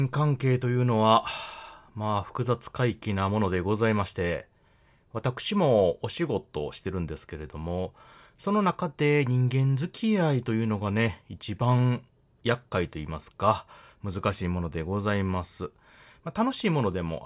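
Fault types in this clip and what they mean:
No technical fault can be heard anywhere in the speech recording, and the signal stays steady and continuous throughout.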